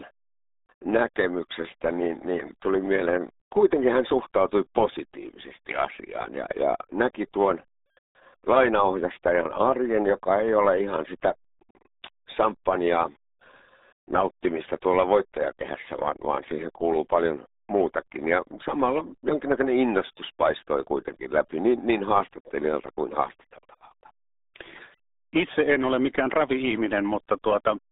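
From start to finish the speech carries the RealAudio 14.4 codec sound, RealAudio 1 style. Everything lives in a narrow band, roughly 250 Hz up to 3.7 kHz, with nothing at all above 3.8 kHz, so sibilants and air are gone. The coding damage is heavy: vowels come out muffled and gargly, with that watery, smeared texture you'd expect from squeezing speech into a stream that fits about 8 kbit/s.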